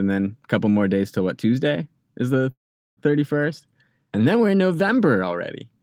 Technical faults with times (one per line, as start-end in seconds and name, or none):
2.51-2.99 call audio freeze